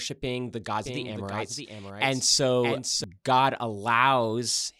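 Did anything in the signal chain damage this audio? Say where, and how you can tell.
Yes. A doubled audio track runs from 0.84 to 3.04 s, after "the gods": an abrupt, dry copy trails about 0.7 s, roughly 5 dB down, likely from a slower second capture path.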